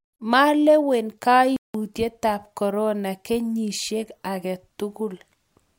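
At 1.56 s the speech cuts out abruptly in mid-flow and the output falls completely silent for about 180 ms, until sound returns at 1.74 s. The gap is too long to pass as a natural pause, so it breaks the rhythm of the delivery. This is a playback stall, most likely caused by the player running short of buffered data or its output thread being held up, leaving nothing to send until it recovered.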